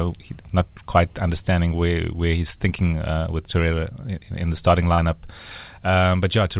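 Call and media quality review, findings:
Short concealed packet loss at 4.94 to 5.00 s, just after "in the starting". Symptom: brief smear and wobble, about 40 ms. Component: receiver jitter buffer and decoder concealment. Mechanism: late or lost audio, gap filled by extending the preceding sound, then crossfaded back into real audio. Call path audible as a band limit with nothing above 4 kHz, which fits G.711 A-law at 64 kbps.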